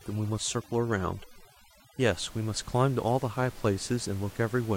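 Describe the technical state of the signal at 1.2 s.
At 1.2 s the speech sits inside a stretch of overdone noise removal running from 0.0 to 2.0 s. The noise reduction is set far too hard. Frequency bands near its noise estimate are pulled down or switched off, and the quiet parts of the voice vanish with them. The room noise, about 21 dB under the speech, drops and breaks up into twinkling specks.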